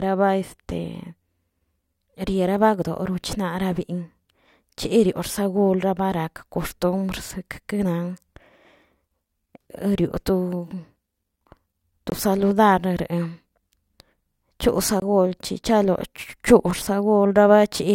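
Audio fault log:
12.10–12.12 s and 15.00–15.02 s, block of digital silence: Twice, 20 ms of samples became zeros, pointing to the output buffer not being filled in time. The speech cuts to dead silence and back with no fade, leaving a brief hole each time.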